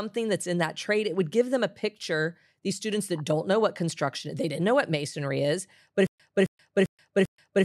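Speech runs cleanly until just after "what masonry is but", when at 6.07 s a stutter with silent gaps sets in and lasts to the end at 7.64 s. A 267 ms fragment plays four times, each followed by about 129 ms of dead digital silence, repeating every 396 ms. The playback or stream has likely stalled and replayed its last buffer on each retry. The true silence between identical bursts sets this apart from a seamless loop or a simple dropout.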